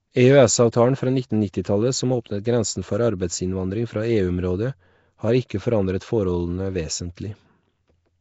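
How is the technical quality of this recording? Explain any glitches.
The quality is pretty rough. The speech carries constant codec damage, and there are three brief smears before sharp onsets.

Throughout, everything above 7.7 kHz is gone, and the speech has a hissy, grainy halo with an underwater feel. That points to Nellymoser compression, likely Flash's Nellymoser Asao at a low rate, something like 32 kbps, where weak bands are dropped and replaced with noise.

Pre-echo shows up at 0.72 s, at 1.63 s just before "som åpnet grensen for", and at 5.49 s right before "forandret forholdene". Each time, a hiss of about 13, 18 and 16 ms leaks in ahead of the attack and softens it. The codec spreads its noise across a whole block, so the quiet moment before a sudden onset gets filled too.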